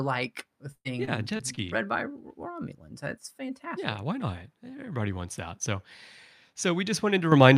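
A speech recording with two faults. Between 0.71 and 1.59 s the connection suffers repeated packet loss, producing a robotic sound: audio data goes missing or arrives too late five times in quick succession, and each hole is bridged by stretching out the sound that came just before it. About 180 ms of the stream vanishes in that stretch, the longest gap near 100 ms, so roughly a fifth of the passage is patched-in filler that makes the speech choppy and mechanical, with fragments dropped. Then at 7.32 s the microphone volume is stepped up: the calling software judges the input too quiet and raises the device's capture level in a single jump of about 9 dB. The speaker and the room noise behind them both get abruptly louder together at that instant, instead of rising smoothly.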